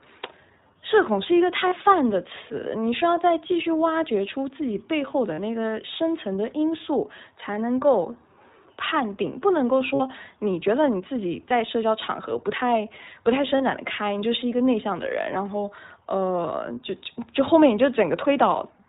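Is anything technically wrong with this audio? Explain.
Yes. The whole recording carries iLBC codec coloring, a narrowband coding that strips everything above 4 kHz and renders each 20 ms frame's excitation independently. The speech sounds muffled, slightly rough and synthetic, which fits a setting around 15.2 kbps, and the damage is plainly audible.

Lost iLBC frames interrupt the speech at 1.68–1.74 s, 5.34–5.40 s, 9.94–10.01 s and 13.58–13.61 s. Each gap is filled by repeating the last pitch cycle blended with noise, so it sounds like a brief held, buzzy vowel. The gaps fit one to three missing 20 ms frames, and clean speech resumes almost immediately.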